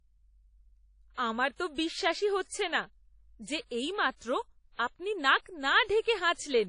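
From start to finish the speech has a washy, ringing quality, with a hiss that swells and fades along with the voice, and nothing is heard above about 10.1 kHz. This points to WMA compression, likely at a bitrate around 32 kbps. The transform codec quantises long blocks coarsely, so its noise smears across tens of milliseconds around each sound, while weak high-frequency detail is discarded outright, leaving the top of the spectrum empty.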